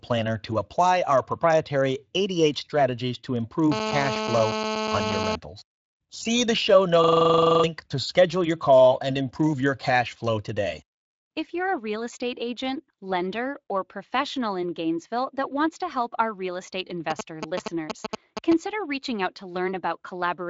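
It's a speech recording, coming through a Speex codec with the top end stopping around 7.5 kHz and only light coding grit. The first problem is a GSM phone buzz from 3.72 to 5.36 s. A nearby 2G handset in a call is pulsing at 216.7 Hz, and the audio circuitry rectifies those radio bursts into a hard, raspy, harmonic-rich drone sitting only about 2 dB under the speech. At 7.04 to 7.64 s there's a system hang loop. The system froze while the sound hardware kept replaying one 42.7 ms slice, which fits a 2048-sample buffer, 14 times over. That gives a machine-gun stutter at 23.4 Hz and swallows roughly 0.7 s of audio. Then from 17.10 to 18.53 s you get GSM signalling bursts, a nearby phone sending short groups of bursts, heard as a galloping dit-dit-dit of brief 217 Hz buzzes at about the level of the speech.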